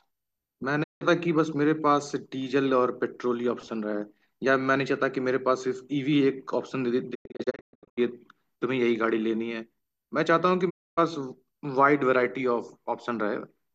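At 0.82 s the speech fades out over about 20 ms into a 0.2 s digital broadcast dropout, where the receiver muted on lost frames. From 7.13 to 7.99 s scattered holes follow, the longest 120 ms, then a 0.3 s gap at 10.69 s. Each appears as a blank full-band column on a spectrogram and a flat line on the waveform.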